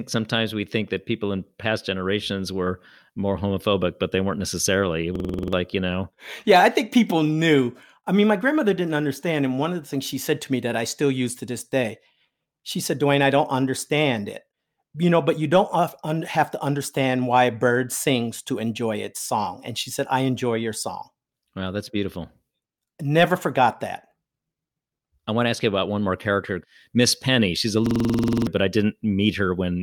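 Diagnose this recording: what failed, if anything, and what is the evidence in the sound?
The driver froze in a system hang loop, replaying one 46 ms buffer, giving a 21.5 Hz stutter at 5.16–5.53 s and 27.86–28.47 s.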